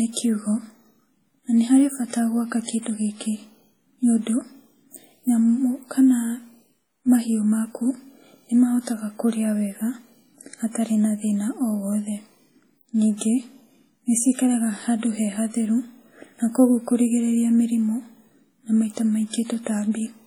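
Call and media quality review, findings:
Ringing, washy speech throughout, hiss breathing with the signal. Likely WMA compression: long transform blocks smearing quantisation noise, heavy damage that fits roughly 32 kbps.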